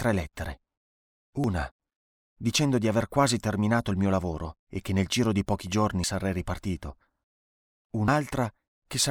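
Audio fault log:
1.44 s, 6.04 s, 8.08 s: dropped buffer (overrun). Each point has an abrupt forward jump in the speech and no gap, as roughly 50 ms of audio vanishes and its two sides butt together, likely because samples were overwritten before being read.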